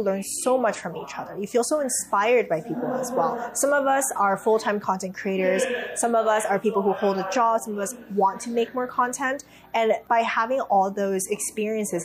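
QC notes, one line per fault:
Nothing stood out on listening, so there is nothing to log for this clip.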